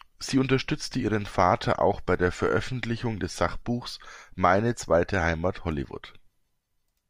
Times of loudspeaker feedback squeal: none

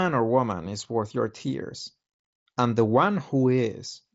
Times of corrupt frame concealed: none

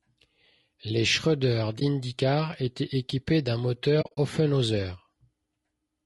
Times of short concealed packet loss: none

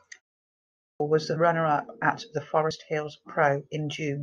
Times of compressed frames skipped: 1.35, 2.70

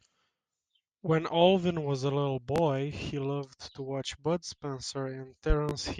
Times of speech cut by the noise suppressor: none

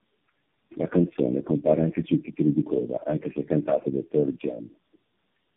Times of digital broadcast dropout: none

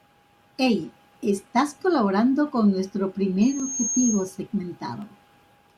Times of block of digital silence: 3.60, 5.02

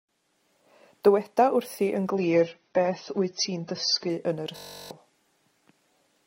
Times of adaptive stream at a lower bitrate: 2.10-4.10

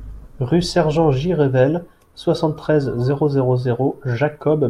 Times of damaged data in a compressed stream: none

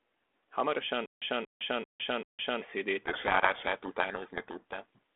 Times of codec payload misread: 3.04-4.98

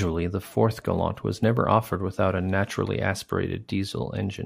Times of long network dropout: none

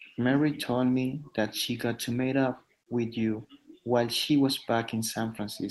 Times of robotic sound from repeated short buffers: none

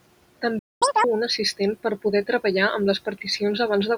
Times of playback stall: 0.59-0.82

